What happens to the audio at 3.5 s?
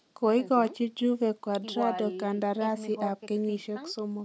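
Nothing goes wrong at 3.5 s: the speech there carries on intact, with only the ordinary call microphone processing trimming the lowest bass and nothing present above 8 kHz.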